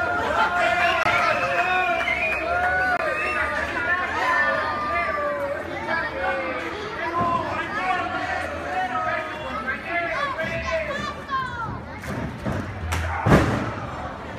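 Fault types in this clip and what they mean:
Bluetooth dropout: two short gaps of silence, each 23.2 ms long, at 1.03 s and 2.97 s, after which the sound resumes as if it had kept playing. Likely a late wireless packet discarded each time; each gap's length fits one packet's worth of audio.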